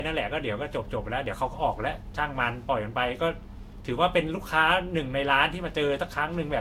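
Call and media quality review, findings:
Generation loss throughout the speech: swirly, hollow texture, smeared onsets, nothing above 16.6 kHz. Likely repeated Vorbis re-encoding, about three passes, each re-quantising on a shifted frame grid. Unlike a single encode near 62 kbit/s, the smearing exceeds what that bitrate would explain.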